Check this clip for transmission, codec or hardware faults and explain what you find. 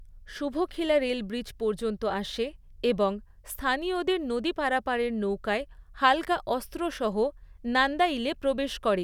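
No faults can be heard anywhere in the recording.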